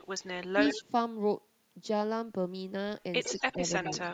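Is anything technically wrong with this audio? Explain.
Yes, the speech has two faults typical of a speakerphone call.

Echo leak at 0–0.27 s, 0.65–0.82 s, 3.24–3.54 s and 3.77–4.09 s: a delayed copy of the speech trails the original by 101 to 103 ms. The first is faint; the later three are roughly 10 dB below the direct speech. The far end's echo canceller likely failed to remove what its microphone picked up from its loudspeaker.

Speech suppressed in double talk at 0.51–0.6 s, 0.79–0.84 s and 3.33–3.67 s: the speech level dips briefly, by roughly 15 dB in the first instance and about 5 dB in the others. This likely happens when the echo canceller, unable to separate the local talker from the returning echo, attenuates both.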